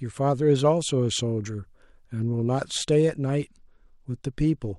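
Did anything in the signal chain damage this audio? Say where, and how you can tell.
Yes. The damage is at the codec stage, over the Bluetooth link. From 2.77 s to the end of the clip, the speech loses its treble and turns dull. A gritty noise rises under it. That is a Bluetooth SBC bit pool drop. The link was congested, so the encoder cut its bit budget. The top sub-bands got few bits or none, and the rest were coarsely quantised. The sound fits a bit pool falling from 31 to 15, near 105 kbps.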